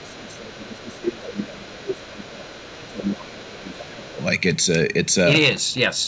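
Hard clipping runs through the whole clip: the speech was driven about 9 dB past what a stage could pass, so a small share of peaks are sliced flat. Those flattened tops add high harmonics, heard as a crackly, harsh edge on louder syllables.

From 0.0 to 2.51 s and again from 2.77 to 4.2 s, the speech sinks by as much as about 25 dB. This is speech suppressed in double talk, likely because the echo canceller, hearing both sides at once, turned the near talker down along with the echo.

In and around those stretches, the other side's voice leaks through at 0.0–0.12, 0.54–1.01, 1.95–2.05, 2.49–2.87, 3.06–3.10 and 3.71–3.87 s as faint fragments roughly 20 to 30 dB under the speech. The likely cause is loudspeaker playback that the echo canceller failed to remove from the microphone.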